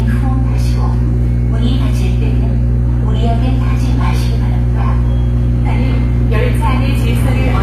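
From start to end the sound carries the smeared, band-limited character of a very low-bitrate encoding, with a dull, papery top and swirling artefacts on transients. The file itself is a high-bitrate MP3, so this is likely low-bitrate audio saved at a high bitrate: an earlier pass at something like 24 kbit/s HE-AAC discarded detail, and re-encoding at around 192 kbit/s preserved those losses faithfully without restoring anything.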